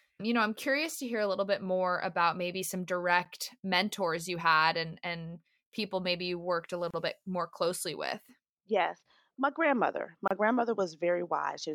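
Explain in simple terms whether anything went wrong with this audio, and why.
Gaps at joins of encoded pieces at 6.91 s and 10.28 s: separately encoded segments were stitched untrimmed, leaving about 30 ms of silence before the speech resumes.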